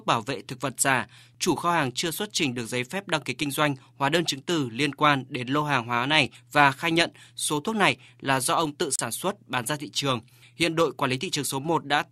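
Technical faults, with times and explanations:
8.94–8.99 s, wireless microphone squelch dropout: after "là do ông tự", a brief hiss swell precedes a roughly 35 ms mute as the fading radio signal trips squelch; a digital dropout lacks that hiss, before "xuất bán ra thị".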